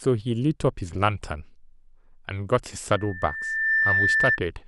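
Speech with loudspeaker feedback squeal from 2.91 s to 4.40 s: a single 1.8 kHz tone swells over under a second to about 5 dB above the speech, as the microphone re-amplifies its own loudspeaker. A spectrogram shows one bright horizontal line; the waveform envelope climbs steadily.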